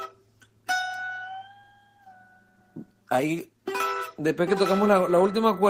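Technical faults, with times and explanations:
throughout, clock drift between sender and receiver: the sending device's clock runs roughly 3 percent slow against the receiver's, so its jitter buffer keeps draining. To avoid running dry, the receiver has to keep adding material, producing small timing hiccups at uneven intervals.
0.20 to 5.45 s, repeated timing corrections: the receiver repeatedly repeats short pieces of audio, all in the same direction, leaving the playback at 97 percent speed. Together these edits add around 150 ms, heard as unevenly spaced hiccups or an unsteady tempo.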